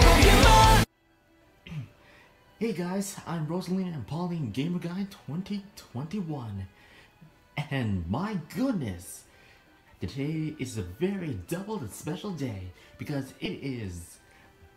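At 13.45 s, compressed frames are skipped: the sound jumps ahead about 40 ms, which fits roughly two 20 ms frames lost.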